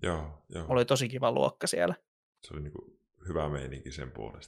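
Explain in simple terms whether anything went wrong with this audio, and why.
Nothing went wrong here, since the speech signal stays intact throughout with no technical problems to be heard at any point.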